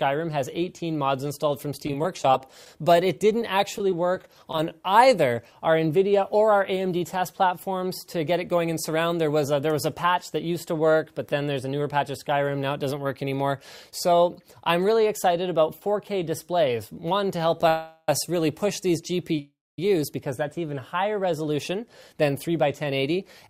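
Between 1.86 and 4.71 s, scattered short gaps appear as about twenty tiny patched holes, none longer than roughly 20 ms, heard as brief ticks and smears rather than one sustained dropout. At 17.68 to 18.09 s and 19.39 to 19.79 s, two call audio freezes of 0.40 s and 0.39 s follow, the first filled without any silence and the second fading into 0.24 s of silence. They are likely jitter buffer underruns from delayed packets, and unlike packet loss, the audio resumes exactly where it stopped. From 21.46 to 23.47 s, a jitter buffer speed-up trims about 100 ms so the audio runs 5% fast. Pitch stays unchanged, which separates it from a resampling error.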